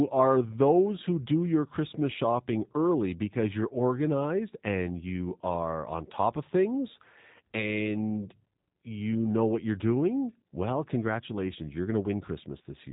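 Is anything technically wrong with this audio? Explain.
Yes. Throughout the whole clip the speech carries plainly audible G.729 codec damage, with a character that fits the 8 kbit/s G.729A variant. The codec rebuilds each short frame from a vocal tract filter, a pitch predictor and a few sparse pulses, so voicing comes out slightly rough, buzzy and synthetic. Nothing passes above 3.8 kHz, leaving sibilants dull. On a spectrogram the energy stops at a hard ceiling near 3.8 kHz, and harmonics look smeared rather than finely drawn.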